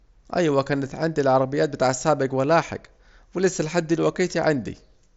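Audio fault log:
Nothing stood out on listening to this speech clip, which comes through a Bluetooth mSBC headset link with no content above about 7.7 kHz.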